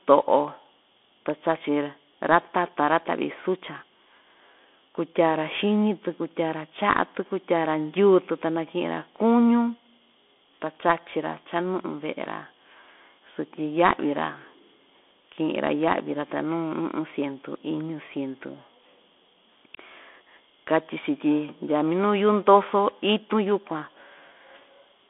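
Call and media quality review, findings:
Bluetooth CVSD headset codec, throughout. Band 250 Hz to 3.5 kHz, nothing above 3.8 kHz. Adaptive-step one-bit delta modulation, consistent with 64 kbps: scratchy s sounds, slope overload on loud highs, granular hiss under speech. Probable component: headset link in narrowband mode.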